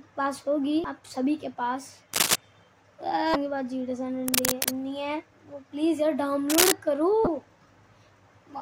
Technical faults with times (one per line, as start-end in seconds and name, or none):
2.13-2.36 cable scratch noise
3.32-3.35 damaged data in a compressed stream
4.26-4.69 cable scratch noise
6.50-6.72 cable scratch noise
7.24-7.27 damaged data in a compressed stream